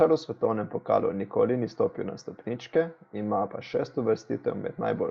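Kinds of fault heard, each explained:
Nothing to flag here: it's speech carried over an ordinary call connection, and there's no fault to point at.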